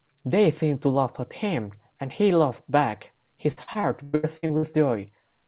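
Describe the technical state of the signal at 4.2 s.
At 4.2 s the speech sits inside a burst of repeated packet loss (robotic sound) running from 3.52 to 4.75 s. Audio keeps dropping out, and each hole is papered over by extending the last received sound, so about 38% of the span is concealment, with the longest gap near 0.1 s. It sounds choppy, with pieces missing. On a waveform, stretches of repeated, oddly regular cycles break the envelope; a spectrogram shows smeared, frozen harmonic bands, all capped at 4 kHz, which fits a narrowband G.711 call codec.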